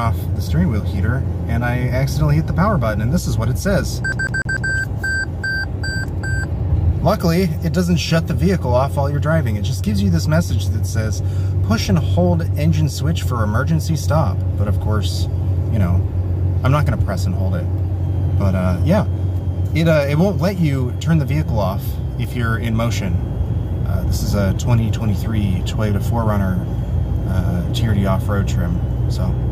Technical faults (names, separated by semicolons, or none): CD stuck on one turn